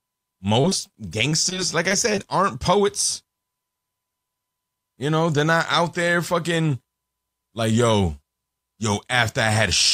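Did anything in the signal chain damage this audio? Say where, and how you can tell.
Yes. The network stage dropped or delayed audio packets three times early on, at 0.61 to 0.66 s, 0.70 to 0.73 s and 0.87 to 0.91 s, each losing about 20 ms. This is short concealed packet loss: the decoder extended the preceding speech across each hole, so each one comes through as a brief smear or wobble.

From 1.29 to 2.19 s, just before "aren't poets", the network repeatedly failed to deliver packets. That left five gaps totalling 100 ms, the longest 21 ms. Each was patched by continuing the last sound, and the gaps came in quick succession. This is repeated packet loss, heard as choppy speech with pieces missing.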